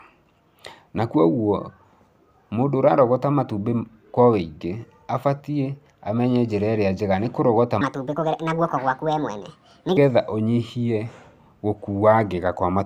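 Wrong sample rate from 7.81 to 9.97 s: audio recorded at 32 kHz plays at 48 kHz unconverted, so speech runs 1.5 times fast, about seven semitones higher.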